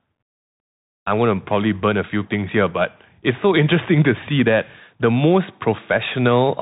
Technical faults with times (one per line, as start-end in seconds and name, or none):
0.00-6.62 Bluetooth CVSD headset codec